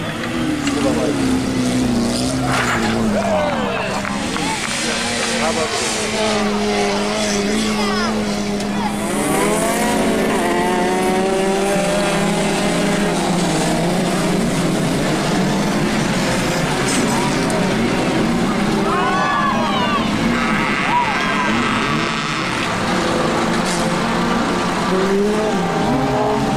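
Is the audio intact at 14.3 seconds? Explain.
No: a 188 Hz buzz that follows the signal's level runs through 14.3 s and the whole clip, from a filter restarted on every block, which fits a 256-sample block.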